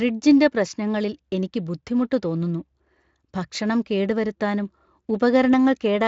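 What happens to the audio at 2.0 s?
Nothing goes wrong at 2.0 s: the speech passes through intact at that moment, carried by the Speex codec working normally.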